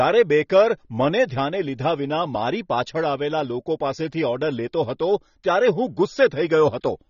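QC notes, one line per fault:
Throughout: AAC compression. Nothing in the speech reaches above 6.9 kHz, so it sounds dull and boxed-in, and the coding damage is plainly audible as smearing in the upper range. This is likely AAC-LC at a low bitrate, consistent with around 24 kbps. With so few bits, the encoder lowers its cut-off and quantises each frame's frequency lines coarsely against its hearing model, discarding detail it judges masked and blurring what remains.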